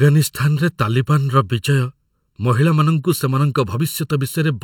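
Speech with channel delay (comb filtering) throughout: one channel trails the other by about 0.7 ms, so the mono sum cancels at evenly spaced frequencies starting near 700 Hz. That stack of fixed notches gives the voice a hollow, phasey colour.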